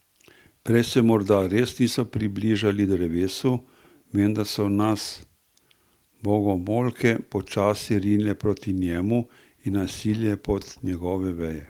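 Listening to this speech recording, nothing stood out as a technical problem at any point.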